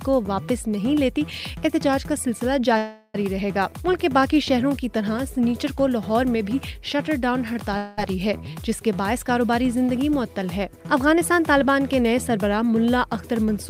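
At 2.77 s there's a call audio freeze running to 3.16 s. The last sound gets carried on as a fading buzz for roughly 370 ms, then picks up exactly where it left off. Nothing's lost, just a gap pushed in. Likely packets held up and an emptied jitter buffer.

Between 7.53 and 7.57 s you get a short stall from a late packet. The receiver stretches the current sound by about 17 ms while it waits, so there's a tiny hold with a faint buzz, and then the audio carries straight on with nothing dropped.

Right after, from 7.77 to 7.99 s, there's a long network dropout. The last sound is drawn out as a fading buzz for about 200 ms and never falls to silence. When audio resumes, roughly 200 ms of it is gone, likely because packets never arrived at all.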